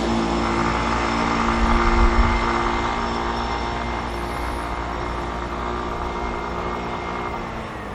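From the very start to the end, the audio carries plainly audible MP3 compression damage, likely from an encode at a rate that fits around 64 kbps. At that budget the encoder runs short of bits, so it chops off the top end at a fixed point and drops quieter frequency lines that then flicker in and out between frames. You hear it as a dull, watery, swirling quality hanging over everything, with sharp onsets smeared.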